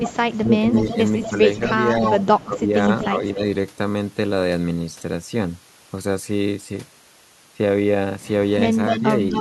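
From 0 to 2.44 s an echo leak trails the speech by about 248 ms, roughly 10 dB below it, likely from a far-end loudspeaker whose echo canceller let part of the pickup return. From 0.43 to 3.42 s, speech suppressed in double talk dips the speech by up to about 10 dB across roughly a second in total, likely because the canceller could not separate the talker from the echo and attenuated both. A brief echo at 3.01 to 3.07 s returns about 250 ms late and about 15 dB down, likely the same leak. From 8.87 s to the end the echo returns at about 257 ms and close to the speech's own level, likely a sharper canceller failure. Within it, from 9.0 to 9.05 s, the speech drops by about 5 dB, likely a short double-talk suppression.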